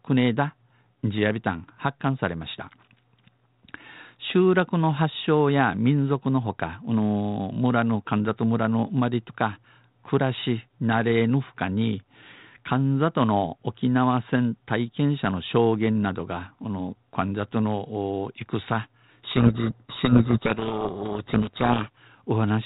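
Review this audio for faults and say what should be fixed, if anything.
From 19.24 s to 21.89 s the speech is buried in harsh, grinding distortion. This is a codec payload misread. The link runs G.726 ADPCM at 32 kbit/s, and the 4 kHz telephone band and slight coding roughness come from it. In this stretch the decoder is still receiving well-formed frames but unpacking each code word wrongly. The sound points to a bit-order mismatch. Every sample difference is rebuilt from scrambled bits, so the output turns to distortion. Agree the G.726 packing order explicitly at call setup on both ends.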